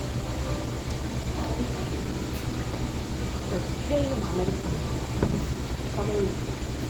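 Opus compression runs throughout the clip, from start to finish, and its damage is plainly audible. The sound is muffled, hoarse and grainy, consistent with the encoder likely falling back to its hybrid speech mode at a starved rate near 16 kbps. Content still reaches about 20.1 kHz, but it is coarsely filled rather than accurately kept.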